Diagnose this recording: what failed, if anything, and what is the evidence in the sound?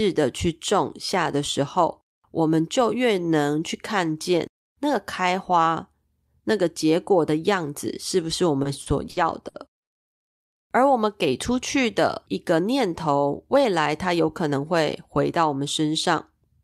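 Repeated stalls (stutter) between 8.63 and 9.90 s point to the network and jitter buffer. The buffer ran dry five times, and the receiver extended the last sound to fill 280 ms, the longest gap 90 ms. A spectrogram shows smeared, frozen harmonic bands where the speech drags.

A jitter buffer speed-up from 13.56 to 14.28 s is also a network-stage fault. With surplus audio queued, the receiver cut out about 70 ms of short pitch-period pieces, so the speech runs at 108% with unchanged pitch. The waveform's periods look spliced closer together, while harmonics stay level.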